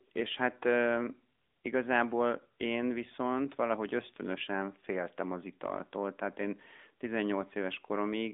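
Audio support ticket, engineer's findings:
AMR narrowband mobile codec throughout the whole clip. Speech band-limited to about 250 Hz–3.6 kHz, nothing above 3.7 kHz. Spectrogram shows an empty region above that ceiling. Plainly audible buzzy, synthetic texture from pulse-driven vocal-tract modelling, consistent with a mid-rate mode near 10.2 kbps.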